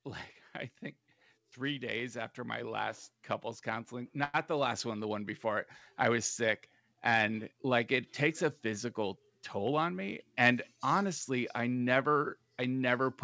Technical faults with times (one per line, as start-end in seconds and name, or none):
1.54-5.73 automatic gain rising
4.24-4.36 short stall from a late packet
9.58-9.91 jitter buffer speed-up
10.33-11.31 jitter buffer speed-up